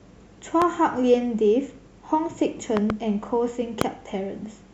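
Speech, marked by loud pops at 0.62–0.64 s, as a close double pop at 2.77–2.92 s, and at 3.81–3.84 s, the last jumping about 20 dB above the speech and the others about 15 dB. Each is a sharp thump riding on top while the talking carries on unbroken beneath, which sets it apart from a dropout or digital glitch that cuts the sound. The likely cause is an electrical pulse from a switch, connector or static.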